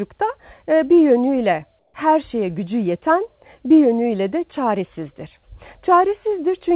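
From 1.79 to 1.94 s, about 150 ms of background turns into flat, featureless hiss about 4 dB quieter. That's comfort noise in place of the background, likely from discontinuous transmission filling the gap synthetically, within the narrowband call sound topping out at 4 kHz.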